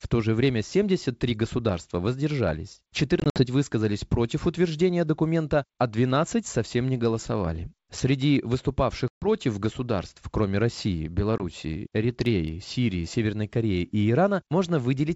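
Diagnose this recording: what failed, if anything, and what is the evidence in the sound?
The network dropped packets on an ADPCM call. Hard-edged silent holes appear at 3.20–3.42 s, after "государства воздержались" (about 100 ms lost in gaps up to 60 ms long), at 9.08–9.28 s before "государств кроме" (140 ms), and at 11.38–11.42 s. The adaptive predictor then resumes out of step, distorting the speech slightly and briefly. The G.722 wideband coding itself stays clean.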